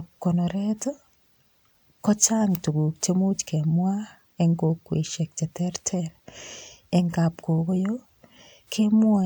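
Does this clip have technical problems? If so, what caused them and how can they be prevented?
No, there are no technical problems in this clip.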